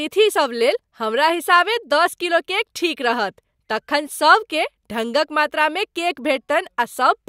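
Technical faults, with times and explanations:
No technical faults found in the speech recording.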